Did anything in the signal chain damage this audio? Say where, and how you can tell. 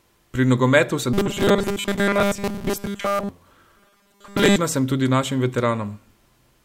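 Yes. From 1.13 to 3.29 s and 3.78 to 4.56 s the speech turns into a rigid metallic buzz fixed at 200 Hz, loosely following the words. This is robotic sound from repeated short buffers, likely a starved driver buffer looping a 5 ms chunk while most real audio is skipped.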